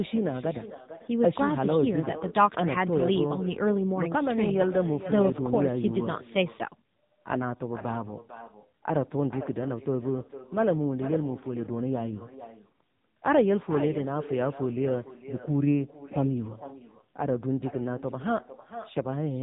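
Echo with no canceller runs throughout the speech. The far end's loudspeaker is leaking back into its microphone with nothing suppressing it, so every phrase returns about half a second later as a fainter, hollow copy roughly 13 dB below the original.

AMR narrowband mobile codec damage is also present from start to finish. Nothing above 3.8 kHz survives, leaving the speech muffled and boxy. Heavy buzzy, synthetic coloring from the pulse-driven vocal model points to a low bitrate, consistent with the 6.7 kbps mode.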